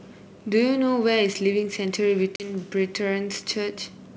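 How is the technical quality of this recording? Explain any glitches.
One glitch stands out in the speech, heard over wideband G.722-style coding that stays clear up to about 7 kHz with only a faint upper-band hiss.

At 2.36 to 2.48 s comes packet loss on an ADPCM call. About two packets (40 ms) drop out and are filled with silence. The decoder's adaptive predictor and step size lose track of the sender's, so the speech resumes with slight, brief distortion before settling. On a waveform this appears as a hard-edged flat gap followed by a misshapen burst. On a spectrogram it shows as a blank vertical stripe.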